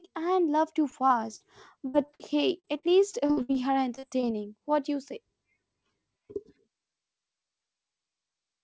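Repeated packet loss (robotic sound) runs from 0.90 to 4.25 s. Packets drop out again and again, each hole patched by stretching the preceding sound, the longest about 60 ms, covering roughly a sixth of that stretch. The speech turns choppy over the call path's band, which stops at 8 kHz, as fits G.722.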